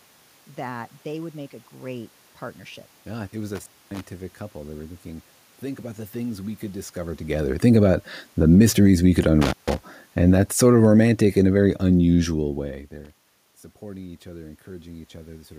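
At 3.55 s, right after "it was", there's an intermittent contact: a loose cable or plug briefly losing connection. The sound drops out for about 250 ms with crackle at both edges, and faint hiss comes through while the line is open. It happens again at 9.42 s, just after "the mysteries we could", with a shorter gap of about 150 ms and the same crackle in and out. Between the two you can hear the talker shift position around 7 s.

Starting at 10.13 s there's automatic gain falling. The gain control found the input too loud, or its background noise too strong, and eased its gain down by about 6 dB over roughly two and a half seconds, to 12.58 s. The voice and the room noise behind it sink together, which is what gives it away. Near the end of that stretch the talker also moves, so the two level changes overlap a bit.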